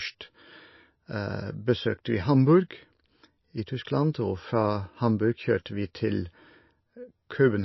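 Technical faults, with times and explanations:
Throughout: likely MP3 compression. The speech has nothing above 5.8 kHz, so sibilants lose their hiss and sound dull, and a watery, swirling texture runs under the sound. An MP3 encoder short of bits drops the treble at a fixed cutoff and zeroes weaker frequency lines that then flicker on and off between frames, producing this warbling. The plainly audible damage points to a low bitrate near 25 kbps.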